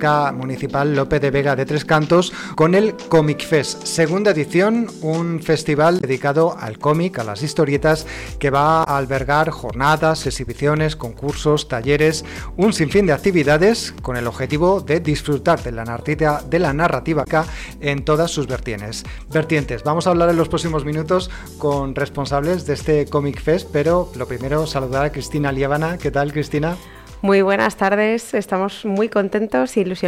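Damaged data in a compressed stream appears at 2.51 to 2.55 s, 5.97 to 6.04 s, 8.81 to 8.87 s and 17.21 to 17.27 s. Corrupted bytes make the decoder misread frames and lose sync, giving a brief chirp, squawk, click or short hole each time.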